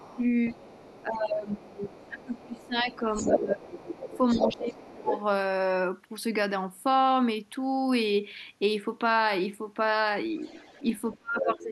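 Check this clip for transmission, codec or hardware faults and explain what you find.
Two echo-control faults affect this speech clip. The talker is repeatedly ducked during double talk, and the far end's voice leaks into the microphone signal.

Speech suppressed in double talk occurs at 0.0–0.22 s, 1.06–5.12 s and 11.18–11.72 s. The talker's level drops by roughly 10 dB at first, around 20 dB through the long middle stretch (about three seconds in total), and as much as 30 dB at the end. This is likely an echo canceller that could not separate near speech from loudspeaker echo and attenuated both. On a waveform the envelope sags abruptly. A spectrogram shows faded, gappy bands.

Other side's voice leaking through appears at 0.0–1.04 s, 1.75–2.67 s, 3.12–3.37 s, 3.76–5.22 s and 10.37–11.55 s. It is faint at first, about 25 dB below the talker. It comes up to roughly equal level around 3.1–3.4 s and stays only slightly quieter to about 5.2 s. 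It returns near 10.4 s at about 10 dB down. The likely cause is residual loudspeaker echo the canceller failed to remove. On a spectrogram this shows as a second, overlapping harmonic pattern that doesn't follow the talker's pitch.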